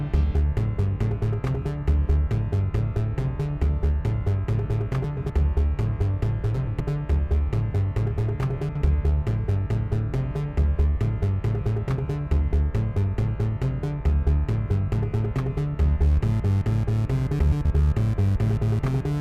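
A garbled flutter interrupts the sound at 5.04–5.30 s, 6.55–6.80 s, 8.69–8.82 s and 17.39–17.65 s: frames out of order. Neighbouring blocks were decoded in swapped order, about 128 ms each (64 ms at 8.69 s), so each stretch plays its halves exchanged while overall timing stays intact.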